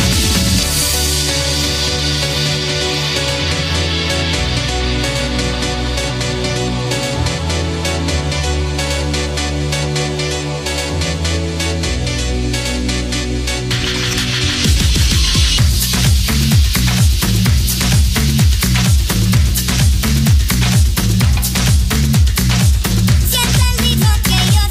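No technical faults are audible anywhere in this audio.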